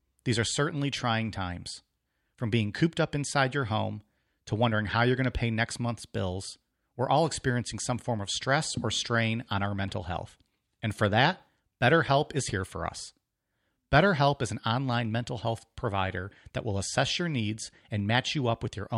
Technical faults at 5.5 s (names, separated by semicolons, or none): none